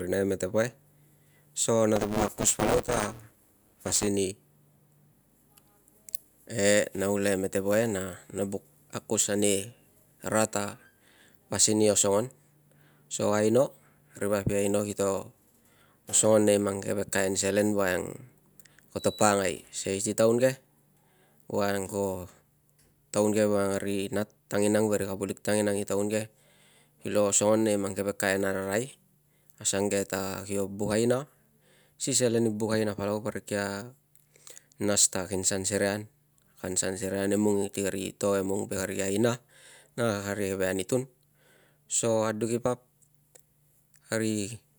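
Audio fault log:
1.96–4.07 s, buffer tearing: a robotic 200 Hz buzz over the speech, as writer and playback pointers cross, leaving roughly a third of each buffer with audio about 10 ms stale.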